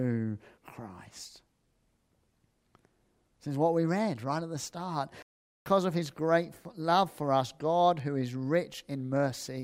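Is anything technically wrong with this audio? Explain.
Yes, there are two kinds of fault. A playback stall runs from 5.22 to 5.66 s, just after "right at the start". The speech cuts out for about 0.44 s and then resumes, likely because the player's buffer ran dry. Bit error spikes occur at 6.06 s, before "great love for us", and at 8.00 s, before "who is". Each is a single sharp broadband tick, from a flipped bit that briefly throws about three samples far off their true value.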